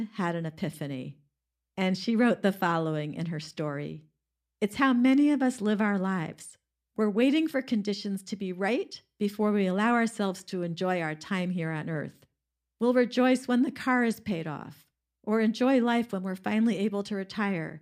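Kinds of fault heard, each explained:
Kinds of fault heard in this speech: none.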